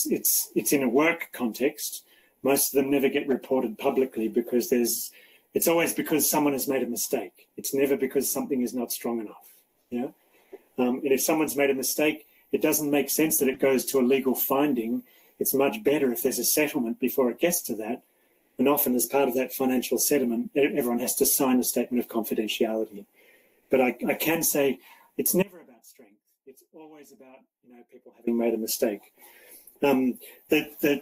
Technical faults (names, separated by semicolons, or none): corrupt frame decoded; audio dropout to a faint residue